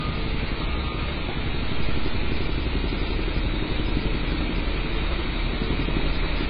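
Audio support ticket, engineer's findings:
Dull, smeared sound throughout, with nothing above 5 kHz. Likely AAC compression (AAC-LC), heavy damage fitting roughly 16 kbps. The encoder discards upper bands and coarsely quantises the rest.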